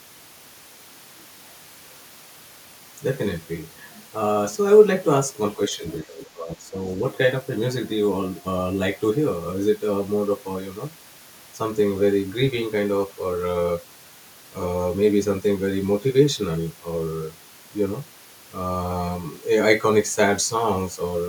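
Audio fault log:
5.56–5.84 s, speech suppressed in double talk: the speech dips by about 10 dB over roughly a fifth of a second. The likely cause is an echo canceller that could not separate the talker from loudspeaker echo while both sides spoke, so it turned both down. On a waveform the envelope visibly narrows.
5.88–5.92 s, other side's voice leaking through: a brief scrap of a second voice, about 15 dB below the main speech. This is likely residual loudspeaker echo that the canceller failed to remove from the microphone. On a spectrogram it shows as a faint burst with a separate harmonic pattern. It is barely visible on the waveform.
6.02–6.77 s, speech suppressed in double talk: a longer dip, about 15 dB deep at its lowest, lasting roughly three-quarters of a second. The speech sounds pushed back, likely because the canceller clamped down again during overlapping talk. On a waveform it appears as a sagging, ragged envelope. 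On a spectrogram the energy thins or breaks up.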